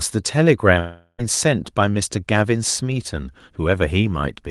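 From 0.79 s to 1.20 s the speech breaks off for about 0.4 s, most likely a long network dropout on the call path. Roughly 400 ms of audio never arrives, and the receiver covers almost all of the gap, around 390 ms, by stretching the last sound into a buzzy tail that fades away. That tail gives way to a brief silence of about 30 ms before the speech resumes, with the missing portion absent. The band limit near 12 kHz fits an Opus call codec.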